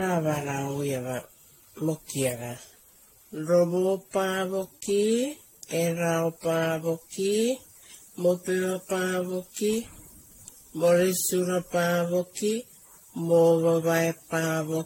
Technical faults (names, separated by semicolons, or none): generation loss